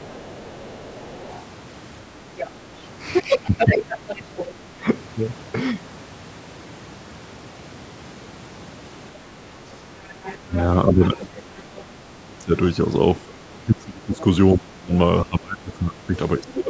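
Right from the start, 0.01 to 1.41 s, there's the other side's voice leaking through, faintly at first, then briefly at 2.37 s and much louder from 3.13 to 4.54 s, and again from 10.23 to 11.82 s. It's most likely the far end playing on a loudspeaker and not fully cancelled. Around that overlap, speech is suppressed in double talk from 3.21 to 4.88 s, 10.38 to 11.19 s, 11.85 to 12.53 s, and 13.24 s to the end. The voice dips by something like 20 to 30 dB in pieces, likely because the echo canceller couldn't separate the two talkers and turned both down.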